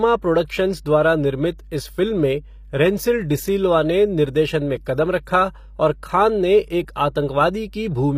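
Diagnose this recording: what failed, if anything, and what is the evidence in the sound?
Mains hum at 50 Hz runs throughout, roughly 20 dB below the speech. This is the analogue wiring stage: a ground loop or nearby transformer couples the power line in.

HE-AAC compression is the likely cause of the codec-stage damage, which is plainly audible throughout, with nothing above 15.5 kHz. Treble is rebuilt from copied lower bands, which fits about 24 kbps.

Pre-echo appears from 0.47 to 0.50 s as 25 ms of hiss ahead of an attack. The codec spread its block's quantisation noise into the quiet moment before that attack.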